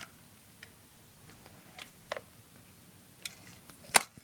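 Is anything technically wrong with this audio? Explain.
Yes. From 0.91 s to 2.23 s the sound turns coarse and watery, losing its clarity for about 1.25 s before it recovers. This is a call bitrate drop. The call's bandwidth estimate fell, so the encoder was told to spend far fewer bits and coded the signal more roughly until the rate came back up. The degradation fits a fall from around 64 kbps to about 20 kbps.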